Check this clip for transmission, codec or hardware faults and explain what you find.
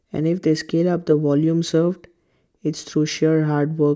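Nothing wrong turned up here; the speech comes across steady and intact, with nothing that points to a problem in the transmission, the coding or the hardware.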